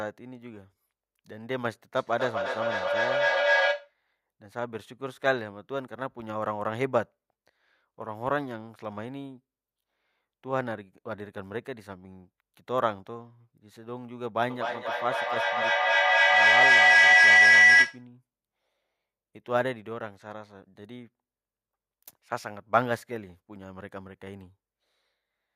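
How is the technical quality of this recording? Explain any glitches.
Two feedback faults mar the recording.

From 1.96 to 3.96 s, feedback echo between two devices: a second device replays the speech into the microphone, so words return roughly every third of a second, thinning and ringing, up to about 6 dB above the speech. Unlike a howl, the words stay recognisable and the repeats don't collapse into a tone.

From 14.5 to 18.07 s, a feedback howl: the same loop, going round about every third of a second, gains level on each pass, narrowing into a tone around 2 kHz, reaching about 12 dB above the speech.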